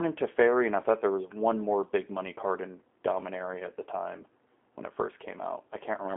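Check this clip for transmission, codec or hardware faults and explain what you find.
One codec fault runs through the whole speech clip: G.729 coding. Frame by frame, the decoder resynthesizes the speech from a vocal tract filter, a pitch predictor and sparse pulses, which fits an 8 kbit/s G.729A link. Nothing passes above 3.8 kHz and the line band sits near 250 Hz to 3.5 kHz, so the sound is plainly rough and synthetic. Plain telephone band-limiting would sound muffled but stay clean, without this buzzy texture.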